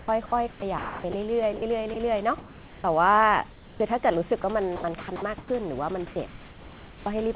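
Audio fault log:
0.00–2.84 s, sound chopped by the voice detector: the sender's voice detector likely kept switching transmission off and on across this stretch, and about 1.02 s in total was replaced by synthetic comfort noise. Quiet syllables and word edges drop out, so the speech sounds choppy and the background flickers between the real room and a flat hiss.
3.52–3.80 s, comfort noise in place of the background: transmission likely paused during a gap in the speech, and the receiver filled the 0.28 s with generated noise shaped roughly like the background. The real room noise, sitting about 21 dB below the loud parts, is swapped for a steady, featureless hiss about 6 dB quieter, heard as a brief dip in the background.
4.42–5.50 s, sound chopped by the voice detector: the voice detector likely toggled again here, and about 0.36 s of the signal was replaced with comfort noise. Soft word edges are clipped off, and the background jumps between real and synthetic texture inside this second.
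6.28–7.06 s, comfort noise in place of the background: a likely second transmission pause was filled with 0.78 s of generated noise. The level change here is smaller, about 2 dB down, so the swap is audible mainly as the room's detail going smooth and uniform.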